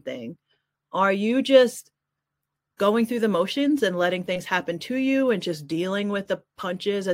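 No audible technical faults occur anywhere in this speech.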